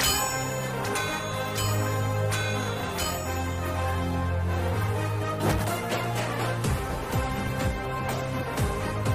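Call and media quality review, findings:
No faults found in this call and media quality review.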